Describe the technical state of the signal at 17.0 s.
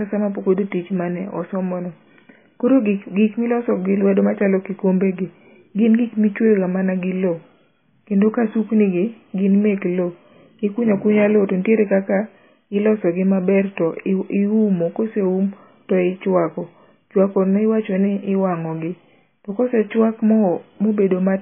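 At 17.0 s, as throughout, the speech is band-limited to about 3.5 kHz and sounds watery and swirly, likely MP3 compression at a very low bitrate, unlike a clean low-pass.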